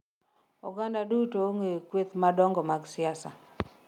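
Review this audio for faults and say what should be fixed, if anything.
The microphone volume is stepped up twice: at 1.11 s the level jumps by about 7 dB, and at 2.13 s it rises again by about 5 dB. Both the speech and the background noise floor lift together at each point, showing the change happened at the input gain, not in the source. Automatic gain control in the call software judged the microphone too quiet and raised the device volume in discrete steps. Disable automatic microphone adjustment and set the input level manually before recording.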